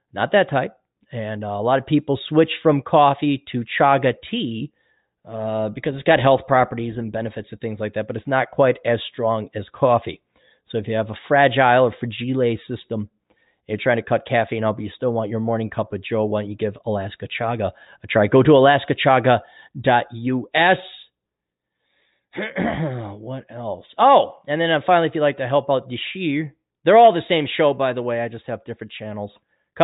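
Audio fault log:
No fault is heard anywhere in this speech recording. Nothing calls for a timed entry in the log.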